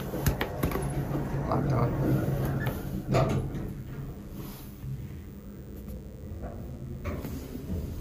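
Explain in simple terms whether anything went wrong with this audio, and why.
Mains buzz runs from start to finish, a steady, raspy hum sitting quietly underneath the main sound. It comes from the 50 Hz electricity supply leaking into the recording, for instance through a light dimmer, a power adapter or a poorly shielded cable. Each cycle of the supply creates sharp electrical spikes, and those spikes carry a whole ladder of higher tones, which is why it sounds gritty rather than like a smooth low hum.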